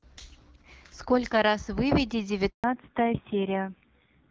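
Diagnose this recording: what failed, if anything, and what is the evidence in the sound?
Network stage: there's a handover gap at 2.50 s, where the speech cuts out for 140 ms while the call switches networks and no frames get through.

Codec stage: from 2.64 s onward there's a fallback to narrowband. Everything above 4 kHz is gone and the speech turns dull and rough after the clean HD Voice earlier, which fits a low-rate AMR narrowband codec.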